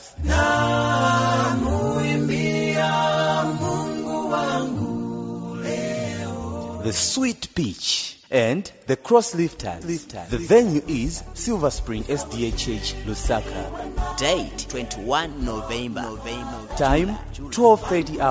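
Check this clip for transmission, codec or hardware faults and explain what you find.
I found no faults to explain in this clip.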